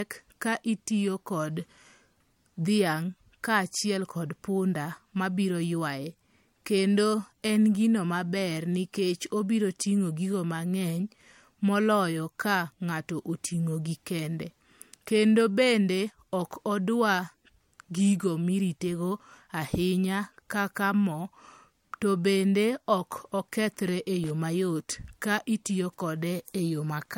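Across the whole speech clip, nothing is present above 16.7 kHz, and the artefacts of the earlier coding remain. This is most likely low-bitrate audio saved at a high bitrate. The cut-off and artefacts point to an earlier MP3 pass at around 64 kbit/s, later re-encoded as a much larger MP3. The second encode cannot restore the discarded detail and contributes almost nothing audible of its own.

From 24.24 to 24.30 s there is a short burst of loose connector crackle, lasting about 60 ms. It is an irregular scratchy rasp. A worn or dirty contact is making and breaking several times in quick succession. Each break chops the signal, and any DC on the line turns the switching edges into clicks, so the result is ragged crackle rather than a single clean dropout.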